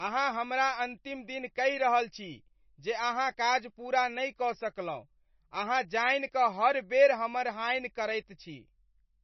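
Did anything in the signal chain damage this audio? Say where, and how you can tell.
Yes, at the codec stage, and the damage runs through the whole recording. Nothing survives above 5.9 kHz, so the speech sounds dull, with watery, swirling artefacts across the entire clip. That points to heavy MP3 compression, likely at a very low bitrate near 26 kbps. Short of bits, the encoder chopped off the treble at a fixed point and zeroed weak frequency lines, which flicker on and off between frames and blur consonant attacks.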